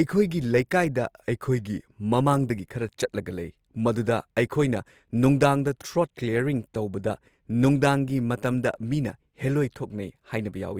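Right from the start and all the way through, the speech has a grainy, rough texture, with a noisy fizz where the tones should be clean. That's plainly audible Opus compression, likely in its music (CELT) mode: when bits run short, it keeps each band's energy but fills the detail with folded or noise-like content. The top still reaches about 20.4 kHz, so nothing sounds muffled, and the damage points to a low rate, around 24 kbps.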